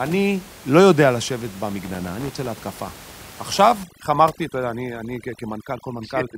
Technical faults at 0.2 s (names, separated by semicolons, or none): none